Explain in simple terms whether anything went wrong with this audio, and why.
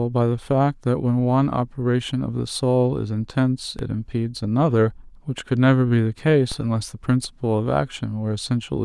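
Something did go wrong, twice. At about 3.79 s and again at 6.52 s there's a DC step: the signal's resting level suddenly jumps off its zero line, as if an offset got switched into the input. You hear each jump as a short low thump while the speech carries on untouched. The offset doesn't stay put. It drains away, since anything below roughly 20 Hz gets filtered out, so the thump is brief.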